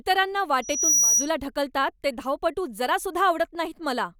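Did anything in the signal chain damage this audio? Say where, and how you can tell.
Yes. Loudspeaker feedback squeal occurs in the acoustic path between microphone and loudspeaker, ahead of any digital stage. From 0.62 to 1.30 s a single pure tone at 5.8 kHz rises out of the speech, swelling over roughly 0.3 s to sit about 5 dB above it. It then collapses just before "ढकलतात ते धावपटू". The microphone was picking up its own loudspeaker, and at 5.8 kHz the loop gain exceeded one, so that frequency fed itself and grew on its own.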